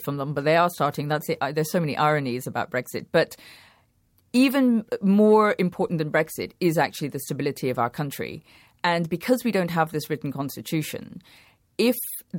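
Speech, with nothing technically wrong with it.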